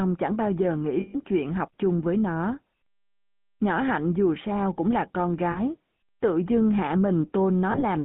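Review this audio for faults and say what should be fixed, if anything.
The speech runs through the GSM full-rate codec for the whole clip. The line is band-limited from about 150 Hz to 3.5 kHz, and the codec damage is plainly audible: a buzzy, gravelly texture. This comes from the regular-pulse excitation, which rebuilds the vocal-tract signal from a sparse pulse train and discards the upper band. The character fits the 13 kbps full-rate mode. To prevent it, use a wideband codec such as AMR-WB on this path.

Lost GSM frames occur three times. The first runs 1.00 to 1.16 s, between "chẳng bao giờ nghĩ" and "chuyện học chung với", a 140 ms hold that fits several consecutive lost frames. The second runs 5.52 to 5.60 s, after "sao cũng là con", and lasts 40 ms. The third spreads short gaps of about 20 ms each across 7.72 to 7.85 s. During each gap the decoder repeats the last good frame, which gives a rough metallic ring. 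To prevent it, reduce radio-link frame errors through better coverage or stronger channel coding.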